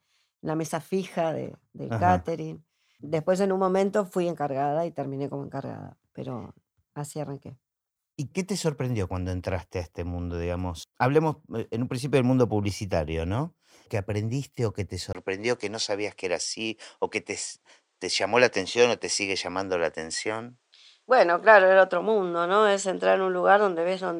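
At 15.13 s, right after "aprendiste o que te", the speech drops out for a brief 20 ms gap, then returns duller and thinner through to the end: nothing above 9.9 kHz, a level shift of roughly 5 dB, and a new, faint noise floor around 50 dB under the speech. This pattern points to an input switched to a poorer device, likely a changeover to another microphone or a headset's call profile, with its own narrower band, tone and background noise.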